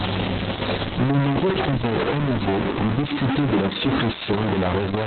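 A stuck bit, likely from a broken data line or converter, forces one sample bit to a fixed value across this speech clip, so about half the samples are offset and the sound carries distortion, with the pauses between phrases filled by steady noise instead of silence. Opus voice compression at a very low rate, which fits about 6 kbps in SILK narrowband mode with long 60 ms frames, removes everything above about 4.3 kHz and codes the excitation coarsely, leaving the speech heavily muffled, hoarse and slightly robotic from start to finish.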